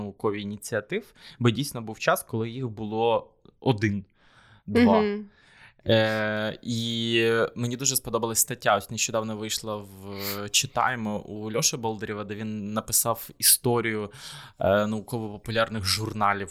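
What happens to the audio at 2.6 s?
Nothing goes wrong at 2.6 s; the speech there plays through intact, with no dropout, glitch or distortion.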